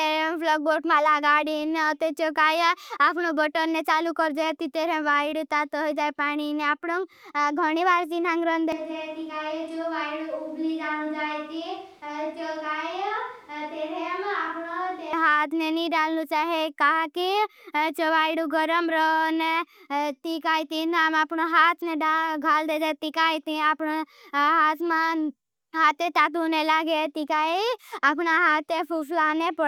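At 8.72 s the speech suddenly goes roomy and hollow, loses its low end, drops a few decibels and picks up background noise sitting around 30 dB under it, then snaps back at 15.13 s. That's a switch to a distant microphone, likely the close mic dropping out.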